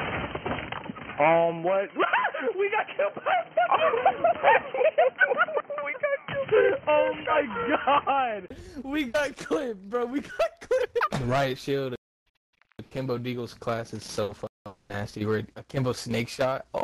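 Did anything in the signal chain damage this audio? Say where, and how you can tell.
Yes. From the start to 8.50 s the audio has nothing above 3.1 kHz, a boxy, dull tone, a different background noise about 40 dB below the signal, and a level a few decibels off from the rest. At 8.50 s a brief gap of about 20 ms precedes clearer sound. The cause is likely an input switched to a poorer device at the driver stage, such as a narrowband headset profile, before the system changed back to the better input.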